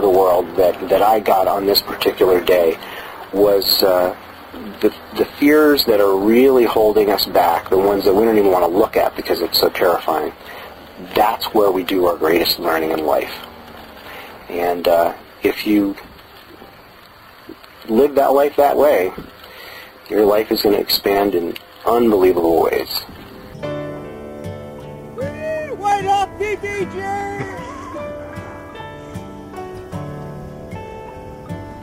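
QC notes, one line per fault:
0.15 to 31.71 s, clock drift buffer slips: a click or pop recurs every 0.644 s across the sound, about 50 in all. The likely cause is two devices running on separate clocks that disagree by around 300 ppm, so the buffer between them steadily fills or drains until a small block of samples, roughly seven, is dropped or repeated. Each such jump breaks the waveform, giving the regular tick.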